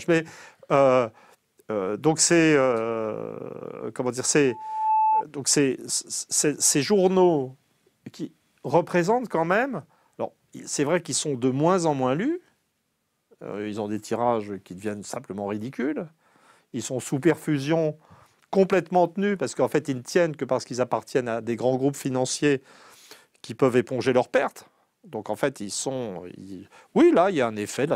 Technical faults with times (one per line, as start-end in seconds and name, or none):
4.48-5.24 loudspeaker feedback squeal